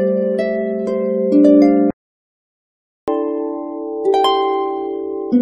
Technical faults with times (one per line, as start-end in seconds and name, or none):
1.91-3.08 playback stall
3.08-5.32 catch-up at higher speed